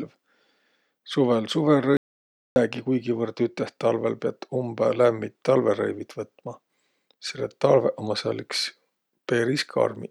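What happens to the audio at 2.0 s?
An audio dropout to silence runs from 1.97 to 2.56 s: the input was likely lost, so the speech cuts out into 0.59 s of dead silence, a flat waveform and blank spectrogram.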